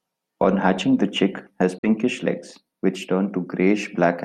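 A speech clip with a brief gap from 1.78 to 1.87 s, where the sound cuts to silence, most likely a Bluetooth dropout from packets arriving too late. The waveform shows a flat-line hole and the spectrogram a clean vertical blank band, with speech resuming mid-flow as though it had played on.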